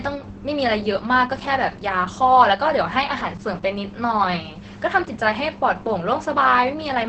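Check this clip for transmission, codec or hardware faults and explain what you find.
One codec fault runs through the whole speech clip. Opus voice compression, throughout: the sound fits SILK in wideband mode at a rate near 10 kbps, with nothing above 8.7 kHz and a coarsely coded excitation, so the heavily damaged speech sounds muffled, hoarse and faintly robotic.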